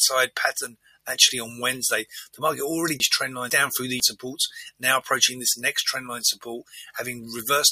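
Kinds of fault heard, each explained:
Noise suppressor applied to music or sounds: A speech-oriented noise suppressor is running over the whole clip and treating steady material and tails as noise, so the level keeps sagging and recovering by around 5 dB, giving a pumping, thinned-out feel throughout.
Sound cut by the noise suppressor: In three spots the suppressor clamps down much harder on sustained or fading sound, at 0.68 to 1.08 s (down about 20 dB), 2.05 to 2.4 s (about 15 dB) and 6.65 to 6.96 s (about 17 dB), so those stretches duck or die away early.
Chunks out of order: Between 3.0 and 4.0 s, two half-second chunks play in swapped order because one came through a chunk late. Nothing's missing, but that second sounds jumbled, with three hard joins.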